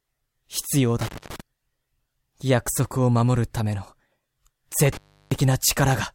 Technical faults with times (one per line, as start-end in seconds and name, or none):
1.01-1.40 intermittent contact
4.92-5.36 intermittent contact